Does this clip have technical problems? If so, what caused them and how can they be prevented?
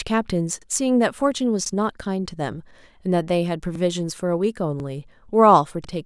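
Yes. Overlapping chunks cause stutters at 0.62–0.66, 1.66–1.71, 3.75–3.80, 4.80–4.85 and 5.85–5.89 s, where each 1 s chunk replays the preceding 46 ms. Prevent this by advancing each chunk by exactly its own length, or by crossfading and trimming any overlap before output.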